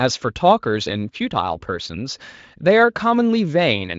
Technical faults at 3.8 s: none

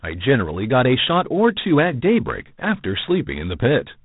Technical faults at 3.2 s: G.726 ADPCM

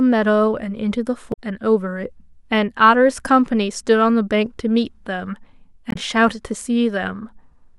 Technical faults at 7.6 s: none

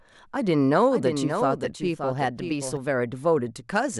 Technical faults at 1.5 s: doubled audio track

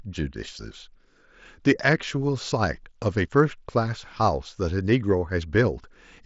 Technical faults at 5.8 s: none

